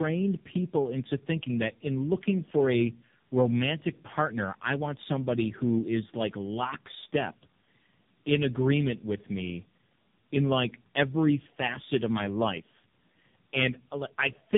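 Tandem speech coding runs through the entire clip. The speech was decoded and re-encoded at successive network borders, with each coder working on the already damaged output of the one before, so the errors stack. The result is rougher, duller and more warbly than any single codec would give. The warble and coarseness point to low-rate AMR-NB-style coding at both ends of a chain of about three speech coders, and nothing is present above 3.7 kHz.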